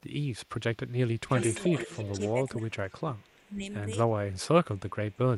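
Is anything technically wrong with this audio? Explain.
Yes. A delayed copy of the speech returns from 0.75 to 2.48 s at about 10 dB below the speech, and faintly, about 35 dB down, from 2.88 to 3.51 s and 4.76 to 5.18 s. This is an echo leak, likely from a loudspeaker's output getting past the far end's echo canceller. The fixed 339 ms lag marks it as echo rather than reverberation.

From 1.86 to 3.63 s the speech dips in pieces, by up to about 25 dB for roughly a second in total. This is speech suppressed in double talk, likely an echo canceller turning down its own talker along with the loudspeaker echo. It differs from dropouts because it happens only during overlapping speech.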